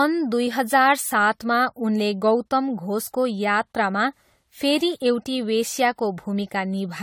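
Throughout the speech, generation loss is audible: swirly, hollow and smeared, with blurred consonant onsets. It likely comes from repeated lossy re-encoding, about five passes, pointing to AAC-LC near 64 kbit/s. A spectrogram shows smeared transients below 20 kHz.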